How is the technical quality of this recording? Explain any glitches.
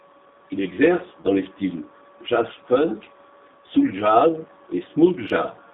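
The technical quality is limited, with two clear faults.

Throughout, the G.729 codec is at work. The band runs only from about 200 Hz to 3.7 kHz, which fits G.729A at 8 kbit/s. The codec rebuilds speech from a vocal tract filter, a pitch estimate and a few pulses per frame. Its damage is plainly audible as a rough, synthetic, muffled edge.

From 1.21 to 1.26 s, just before "les styles", there is VoIP packet loss concealed by the speech codec. The gap fits about 30 ms of lost audio, one packet's worth. The decoder stretched its last pitch and filter with falling gain. The result is a brief smear of stretched, fading sound, and the next frames start weak.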